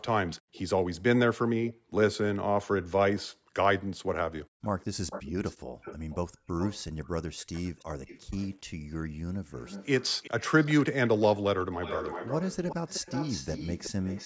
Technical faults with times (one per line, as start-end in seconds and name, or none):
0.28-14.25 echo leak
0.41-5.82 background gated by the echo canceller
8.77-8.90 background gated by the echo canceller